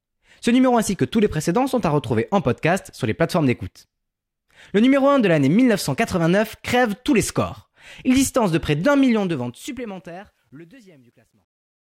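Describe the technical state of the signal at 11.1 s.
At 11.1 s the speech is deep in truncation distortion on the fade-out. It runs from 9.05 s and is worst from 10.56 s to 11.87 s. The undithered fade, consistent with roughly 11 bits, squares the waveform into gritty steps.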